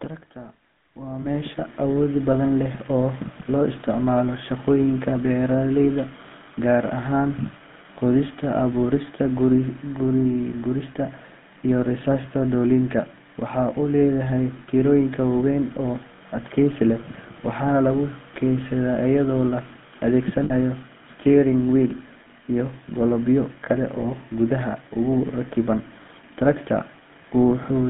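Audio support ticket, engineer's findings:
GSM full-rate codec throughout: buzzy, gravelly roughness, plainly audible. Spectrogram shows a hard band of about 150 Hz to 3.6 kHz, with smeared, coarse harmonics fitting 13 kbit/s full-rate coding.

Lost GSM frames at 1.22–1.27 s and 20.44–20.54 s, the second just before "steering wheel": brief metallic ring from the repeated last good frame, fitting one and three 20 ms frames. Spectrogram shows frozen horizontal bands.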